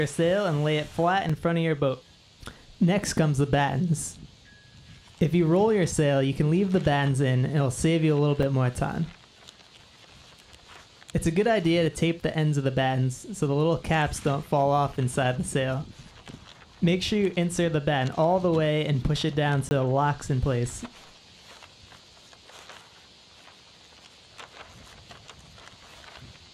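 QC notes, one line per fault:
1.29 s and 8.43 s: block of digital silence, 5 ms each. The output goes dead with no fade, most likely because the output buffer was not filled in time or a calculation gave invalid numbers. Being this short, each is heard as a tick or dip. The waveform shows a brief flat stretch and the spectrogram a hairline vertical gap.
19.69–19.71 s: block of digital silence, 20 ms long, the same cut-out and return without a fade. At this length it comes across as a short hole in the sound, a narrow flat segment in the waveform and a thin blank column on the spectrogram.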